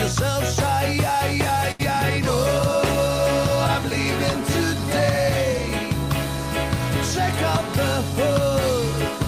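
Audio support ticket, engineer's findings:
Burst of packet loss, 1.71 to 1.81 s. Sound continues as a held, fading tail for about 76 ms, then jumps ahead. Roughly 60 ms of audio skipped. Probable component: network path, receiver concealment. Consecutive packets lost or late. Decoder extends last sound, attenuates. Playout timing shifts about 16 ms after recovery.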